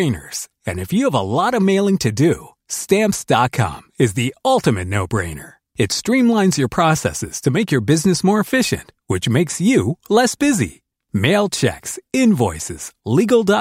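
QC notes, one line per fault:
No faults heard anywhere in this speech recording.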